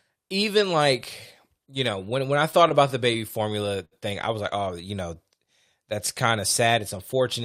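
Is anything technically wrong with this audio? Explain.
Yes. There are two faults.

From 2.52 to 3.93 s the speech shows repeated stalls (stutter). Packets arrived late, so the jitter buffer kept running dry. Eight times the receiver stretched the last sound to fill the gap, for 136 ms in total. The longest gap was 64 ms. Nothing is lost, but the speech drags and stutters.

From 6.68 to 7.42 s there is a jitter buffer speed-up. The buffer held too much audio. The receiver cut out short pitch-period pieces, about 50 ms in all. The speech runs at 106% speed with unchanged pitch, so it sounds hurried.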